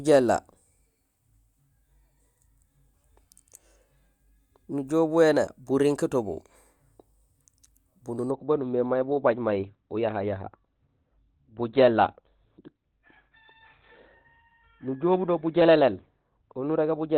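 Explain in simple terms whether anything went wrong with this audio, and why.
From 8.31 s to the end, the speech suddenly turns duller and more muffled, and nothing above 4.3 kHz survives, so the crisp high sounds are gone. There is no pause at the switch. This is an adaptive stream at a lower bitrate: the connection slowed, so the player swapped to a smaller, more heavily compressed version of the audio to keep playing without interruption, trading sound quality for smoothness.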